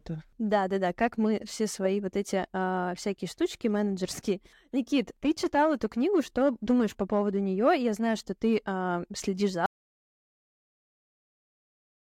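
Audio dropout to silence at 9.66 s: right after "ты э следишь за" the speech cuts off mid-phrase, and the rest of the clip is silent with no room tone, likely because the input was lost while the recorder kept writing silence.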